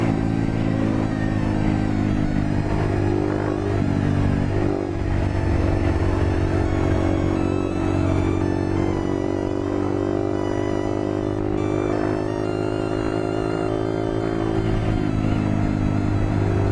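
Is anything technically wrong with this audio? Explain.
No, nothing technically wrong can be heard in this audio; the signal stays steady and intact throughout.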